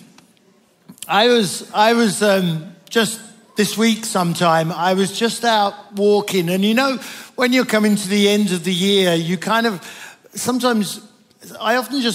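No technical faults are audible.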